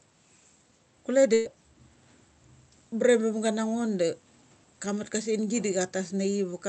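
From 1.33 to 1.47 s the speech freezes into a held, fading sound for 116 ms, then resumes with 120 ms skipped. This is a burst of packet loss: consecutive packets were lost or arrived too late, so the receiver stretched and faded the last sound.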